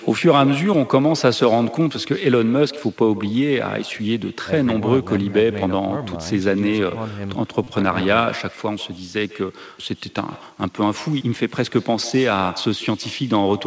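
From the start and all the way through, the speech has an echo with no canceller: the far end's loudspeaker feeds its mic, and your voice comes back roughly 150 ms later, about 18 dB down, as a faint, thin shadow trailing every phrase.

At 7.64 to 7.67 s there's a repeated buffer. Fresh audio didn't turn up in time, so the same 8 ms slice got played again four extra times. It comes across as a quick buzzy stutter, which fits a 128-sample buffer.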